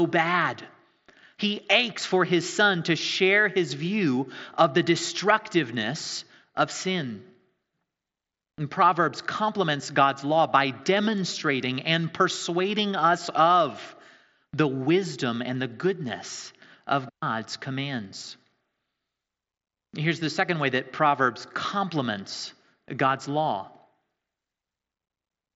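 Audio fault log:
Nothing to log here; the speech comes through a Bluetooth headset link with nothing going wrong along the way.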